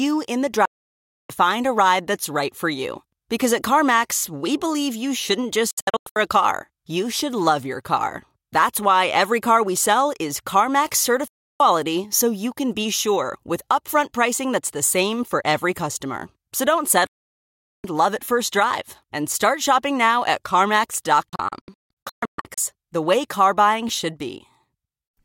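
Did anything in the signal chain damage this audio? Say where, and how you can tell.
Yes. The damage happens at the reception stage: digital broadcast dropout, where the receiver lost signal or rejected corrupted frames and muted until clean frames returned. The speech cuts out with a fast fade of about 3 ms at 0.65–1.30 s, just before "find a ride that's", and again at 11.28–11.60 s before "so you can be", and at 17.07–17.84 s. After "believe you shouldn't just", at 5.71–6.16 s, it breaks into several short holes, and it does so again at 21.29–22.58 s, where the longest gap is 160 ms. Whatever was broadcast in those gaps is simply gone.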